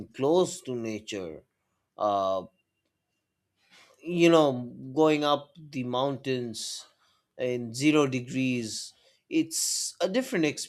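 No technical faults can be heard anywhere in it.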